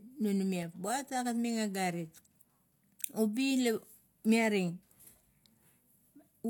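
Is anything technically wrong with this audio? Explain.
Yes. From about 0.63 s to 6.21 s the speech carries a regular click roughly every 1.12 s, about seven in all, each a brief tick rather than a gap. This points to clock drift buffer slips, likely from two devices running on independent clocks that disagree by something on the order of 150 ppm. The buffer between them slowly drifts until a handful of samples is dropped or repeated, and each slip makes one click.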